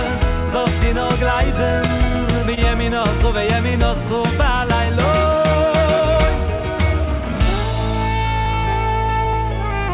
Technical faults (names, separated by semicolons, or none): clock drift between sender and receiver; short stall from a late packet; repeated timing corrections